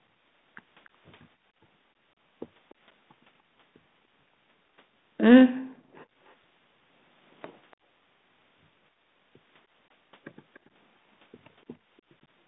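At 2.70–2.74 s and 10.55–10.59 s, an echo leak: a very faint scrap of speech returns 290 ms late. It is a separate repeat, not a reverb tail, likely from a speakerphone's echo canceller letting some through.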